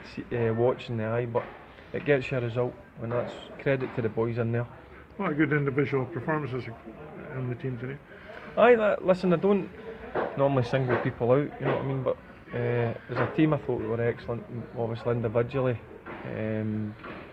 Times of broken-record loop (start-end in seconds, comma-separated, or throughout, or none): none